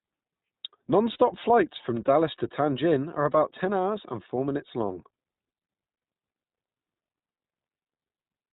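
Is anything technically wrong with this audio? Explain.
Yes. Throughout, the speech sounds band-limited, slightly rough and synthetic, with nothing above 4 kHz: plainly audible iLBC codec coding, consistent with its 15.2 kbps mode and 20 ms frames. At 1.12 to 1.16 s and 7.78 to 7.80 s, brief held, buzzy vowel-like sounds replace the speech. These are lost iLBC frames, about 40 ms and 20 ms. The decoder repeats the last pitch cycle mixed with noise, and the speech recovers immediately afterwards.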